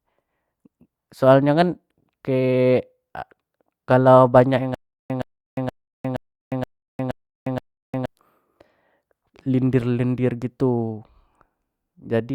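From 4.75 to 8.06 s the speech breaks into a stutter with silent gaps. A 118 ms fragment repeats seven times, each followed by about 355 ms of dead silence, every 473 ms. A stalled stream replaying its last buffer is the likely cause. The missing audio never returns.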